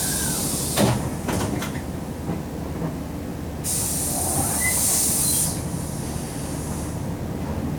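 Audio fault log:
Throughout, video or display buzz: a steady 75 Hz buzz with gritty hash above it sits not far below the sound. A screen or video cable is coupling its field-rate interference into the audio path, so the picture's refresh becomes audible.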